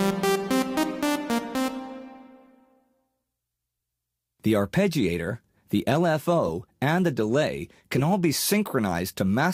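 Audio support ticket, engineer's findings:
Corrupt frame decoded at 1.54 s (faint artifact, around -40 dBFS), 6.45–6.50 s and 7.96–8.02 s (louder artifacts, around -20 dBFS). Damaged compressed frames decoded anyway, misplacing energy spectrally.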